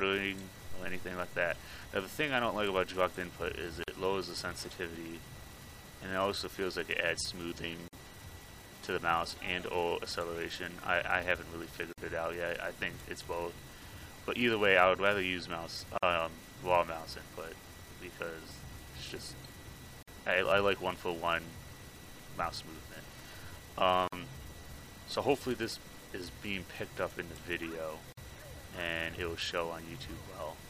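Gaps at joins of encoded pieces open at 3.84, 7.88, 11.93, 15.98, 20.03, 24.08 and 28.13 s, one every 4 s. The first lasts 45 ms and the rest 49 ms each. The sound was encoded in 4-second pieces and joined without trimming, so each join keeps the encoder's start-up delay and the padding of the previous piece's last frame as silence. The edges are smeared by the codec, and the sound resumes where it stopped.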